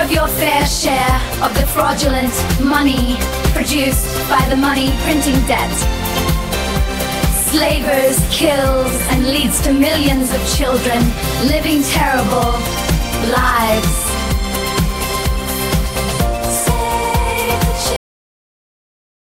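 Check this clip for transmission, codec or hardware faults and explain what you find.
One fault is present: a cut-off end. At 17.96 s the sound stops mid-event and drops straight to digital silence, with no decay, for the remaining 1.25 s. The final buffers were never written or played out, so the signal is truncated rather than faded.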